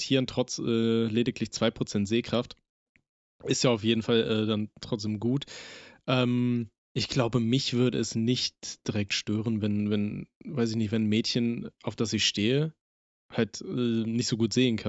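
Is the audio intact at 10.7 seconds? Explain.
Yes, the speech at 10.7 seconds is intact, with no dropout, click, distortion or other fault at that moment.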